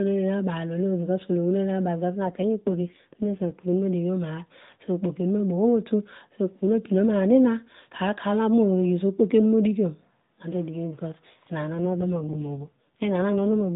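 From 2.24 to 3.53 s, and again from 11.74 s to the end, the speech turns rougher, buzzier and more synthetic, with no gap and no change in bandwidth. This is an AMR rate drop. A weak radio link pushes the narrowband mobile codec to spend fewer bits on the voice and more on error protection, and the coarser sound fits a fall from 12.2 to 5.9 kbps before the rate recovers at 3.53 s.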